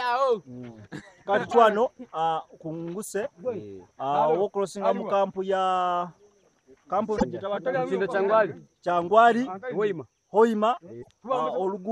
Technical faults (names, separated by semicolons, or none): broken MP3 bit reservoir